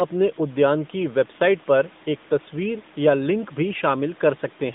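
No faults are present in this speech recording. The room noise sits about 24 dB below the speech, and the narrowband mobile band of roughly 150 Hz to 3.7 kHz fits the AMR-NB codec at 12.2 kbps.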